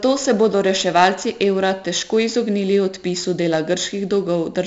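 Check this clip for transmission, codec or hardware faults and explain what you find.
There's one codec fault, running through the whole speech clip: 4-bit ADPCM compression. Each sample is coded as a coarse step off a prediction, so a gritty hiss rides every loud stretch and sharp onsets crunch, and heavily here. Nothing above about 7.7 kHz fits a 16 kHz, 64 kbps stream.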